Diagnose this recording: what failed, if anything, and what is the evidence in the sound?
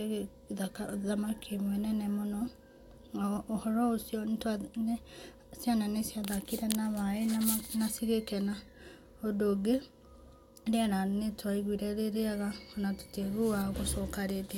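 Nothing failed in this speech recording, and the sound carries no evidence of a fault at any stage.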